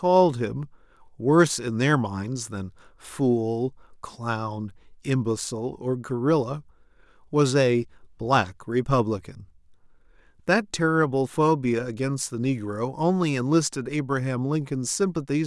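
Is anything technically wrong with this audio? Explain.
No, nothing technically wrong can be heard here.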